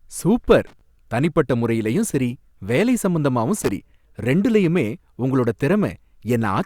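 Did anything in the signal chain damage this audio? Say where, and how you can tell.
Yes, in the analogue wiring. Two short bursts of loose connector crackle cut into the speech, from 0.67 to 0.81 s, just before "தனிப்பட்ட முறையிலயும் சரி வேலை", and from 3.57 to 3.71 s, just before "ரெண்டுலயுமே உங்களோட". Each lasts about 0.14 s and sounds like irregular scratching. A worn or dirty contact is rapidly making and breaking, chopping the signal on and off, and any DC on the line turns each break into a pop.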